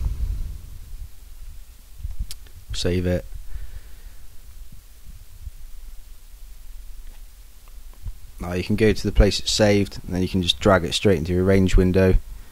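Across the whole clip a grainy, gritty distortion rides on the sound and shifts with it, roughest in the quietest passages, where low-level detail breaks into sputter or drops out between steps. The error sits only around 35 dB below the signal. This is most likely low bit depth without dither: the audio seems to have been truncated to about 9 bits, so the rounding error tracks the waveform instead of spreading into smooth noise.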